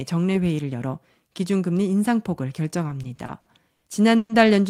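A speech recording with repeated stalls (stutter) between 2.87 and 4.32 s. Over that stretch the audio halts seven times, the longest hold lasting 120 ms, for 340 ms of stretched sound, about 23% of the span. Packets were reaching the receiver late or slower than playback, so the jitter buffer kept draining. Each time it drained, the decoder extended the last sound and faded it on the longer holds. Nothing is dropped, but the speech drags and stammers through that section.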